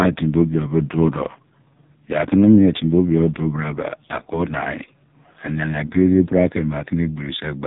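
From start to end, the speech carries heavy AMR narrowband mobile codec damage, buzzy and synthetic, which fits AMR-NB's lowest modes near 5 kbps. A spectrogram shows a flat ceiling at 3.8 kHz with nothing above it, and smeared, coarse formant detail below.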